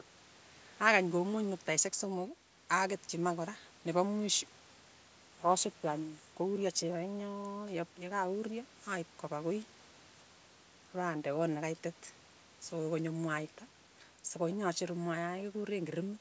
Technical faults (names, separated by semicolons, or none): none